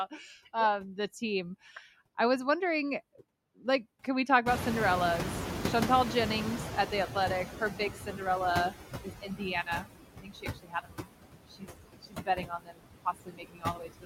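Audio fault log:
Throughout: noise suppressor artifacts. The background sinks in the gaps and swells back under the speech. The suppressor works frame by frame, pulling down each frequency band it judges to be steady noise, by up to about 19 dB here. Because that decision changes from moment to moment, the noise level rises and falls with the speech.
4.46–8.71 s: noise suppressor catching up. Right after "like can we talk" the room noise jumps by about 25 dB, to only about 6 dB below the speech, and it comes through loud at first before slowly settling. The suppressor's picture of the noise was built on the quieter room, so it lags and cuts only about 13 dB at first. It takes about 4.25 s to adapt before the noise sinks to the new level.
7.5–14.05 s: speech cut by the noise suppressor, in seven places: 7.5–8.21, 9.03–9.42, 9.63–9.88, 10.14–11.1, 11.48–11.71, 11.95–12.86 and 13.05 s to the end. 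Parts of the speech sound swallowed or faint, as if they fade into the background. With the noise now this close to the speech, the suppressor mistakes parts of the speech for noise. It turns them down along with it, by about 10 dB at the start of the run and up to about 22 dB later. The cut stretches from a brief moment to most of a second at a time.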